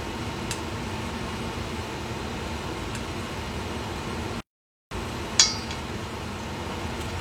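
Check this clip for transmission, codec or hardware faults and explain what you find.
One fault is present: a playback stall from 4.41 s to 4.91 s. The sound cuts out mid-flow into about 0.51 s of silence, then resumes. The likely cause is the player running out of buffered data or its output thread being blocked until it recovered.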